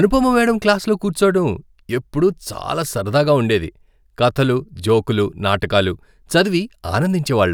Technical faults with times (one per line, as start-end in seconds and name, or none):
none